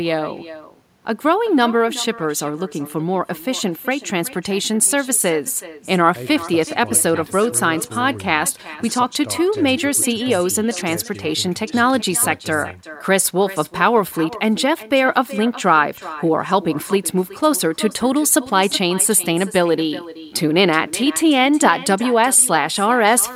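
Throughout the clip, the far end of the call is playing this speech over a loudspeaker, and its microphone is picking that playback up and sending it straight back with nothing cancelling it: echo with no canceller. After the round trip through the network, every phrase returns roughly four tenths of a second later, about 17 dB below the original, as a fainter, thinner copy trailing behind the live speech.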